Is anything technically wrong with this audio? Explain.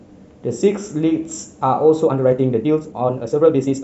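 Yes. From 2.02 s to the end of the clip, the speech shows a time-stretched section: the pace jumps to about 1.64 times normal speed while the pitch stays unchanged. The likely cause is software compressing this stretch to fit a shorter length, discarding small slices of the waveform to keep pitch constant. Because those pieces are removed, the delivery sounds rushed, with an abrupt change of pace at the 2.02 s boundary.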